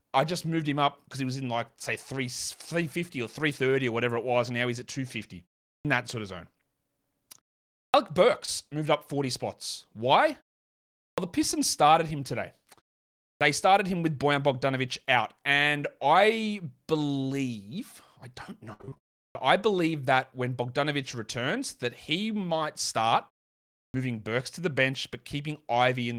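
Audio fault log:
5.78, 7.88, 11.11, 13.35 (before "started him with"), 19.29 and 23.88 s: clipped start after a pause. The output device dozes off in each gap and eats roughly 60 ms of the next onset, so the sound pops in abruptly.
8.45–8.49 s: short concealed packet loss just before "moved up". About 20 ms went missing, and the decoder smeared the previous sound across the hole, leaving a brief smear.
18.73–19.13 s: repeated packet loss (robotic sound) right after "I believe I don't". Nine gaps, the longest 62 ms, get patched over half the stretch, which gives that choppy, robot-ish texture.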